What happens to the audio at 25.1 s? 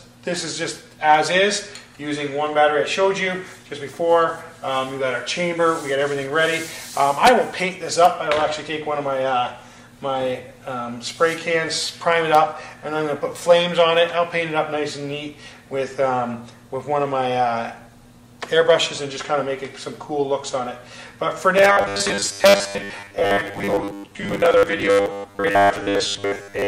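At 25.1 s the audio has robotic sound from repeated short buffers, running from 21.58 s to 26.67 s. A fixed 100 Hz metallic buzz sets in, following the natural sound only roughly. New audio likely arrives too seldom, so most of it is lost while 10 ms chunks repeat.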